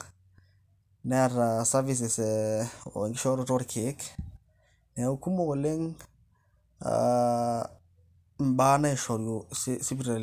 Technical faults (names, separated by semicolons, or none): none